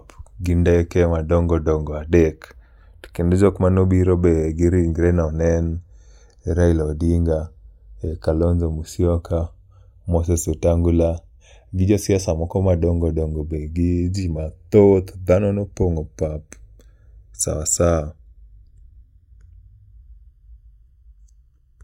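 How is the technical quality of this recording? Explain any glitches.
The recording is affected by one fault present throughout: the two channels drift apart. This speech was captured on two devices running on separate clocks, roughly 30 ppm apart, so the delay between channels grows steadily to under a millisecond by the end. Summed to mono, comb-filter notches sweep slowly through the spectrum, heard as slow flanging. Unlike a fixed inter-channel offset, whose coloration stays static, this one keeps moving in one direction rather than cycling back.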